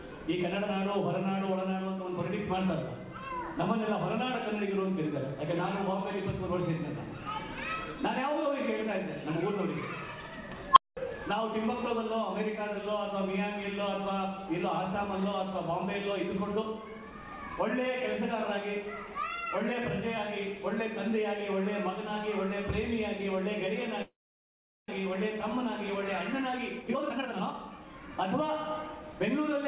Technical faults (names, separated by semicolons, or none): unstable filter; call audio freeze; jitter buffer speed-up